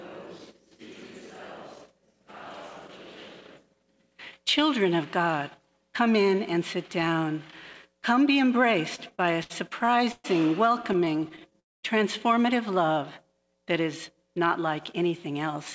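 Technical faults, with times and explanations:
8.96–10.26 s, repeated stalls (stutter): the sound drags and hiccups through eleven short breaks, the longest about 121 ms, each filled by stretching the last sound. Packets arrived later than playback needed, so the jitter buffer kept running dry, with nothing lost.
10.82–11.54 s, repeated stalls (stutter): eleven more brief catches, none longer than 13 ms, give a fine stammer rather than obvious holes. Late packets again emptied the jitter buffer repeatedly, and the receiver bridged each tiny wait by continuing the previous sound.
11.60–11.85 s, call audio freeze: the sound halts for about a quarter second, mostly silent for roughly 210 ms, then resumes where it stopped. Packets were likely held up in transit, draining the jitter buffer, so a 234 ms gap was inserted.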